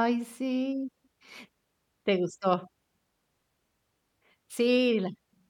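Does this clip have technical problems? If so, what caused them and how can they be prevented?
No, there's nothing wrong to hear in this speech clip, so there's no cause to track down and nothing that needs preventing.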